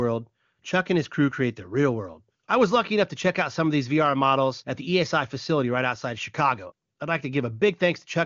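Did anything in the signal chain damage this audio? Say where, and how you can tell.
No, nothing in the chain audibly damaged this speech; it has passed through an AMR-WB (HD Voice) codec at what sounds like the 23.85 kbit/s top rate, which accounts for the band limit with nothing above about 7.3 kHz, and the codec's coloration is at most faint.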